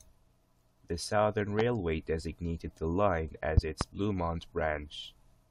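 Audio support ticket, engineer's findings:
Loud pop: likely voltage transient (plug, switch or driver glitch) summed into the signal. Single pop 1.59–1.62 s, about 15 dB over speech, before "designated the line"; double pop 3.57–3.84 s, about 20 dB, after it. Speech continues underneath.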